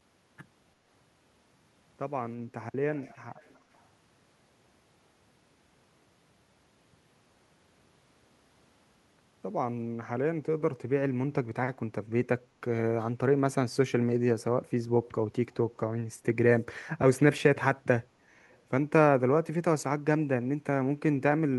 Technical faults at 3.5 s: echo leak

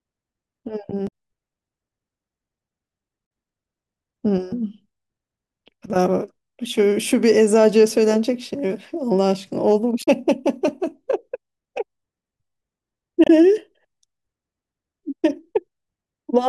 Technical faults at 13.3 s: damaged data in a compressed stream

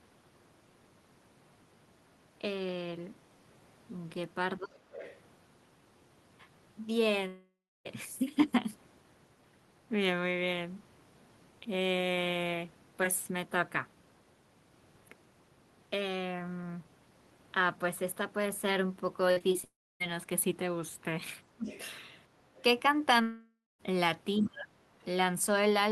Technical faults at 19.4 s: burst of packet loss; short concealed packet loss

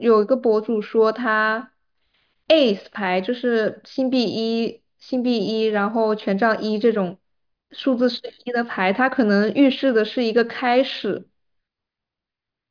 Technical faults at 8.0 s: none

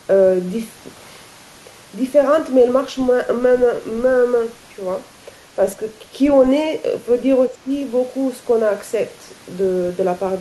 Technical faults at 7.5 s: speech suppressed in double talk

